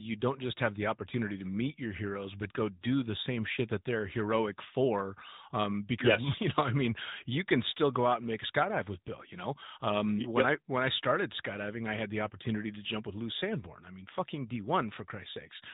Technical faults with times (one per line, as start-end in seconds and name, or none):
0.00-15.73 AMR narrowband mobile codec